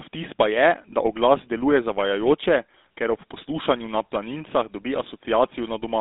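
GSM full-rate codec damage runs through the whole clip: the speech has been squeezed through the original GSM mobile codec, and the result is plainly audible. The codec rebuilds the voice from a vocal-tract model excited by a sparse, evenly spaced pulse train, which gives the voice a buzzy, gravelly grain. The band is held between roughly 250 Hz and 3.7 kHz, so the speech sounds thin and boxy, consistent with a 13 kbps full-rate stream.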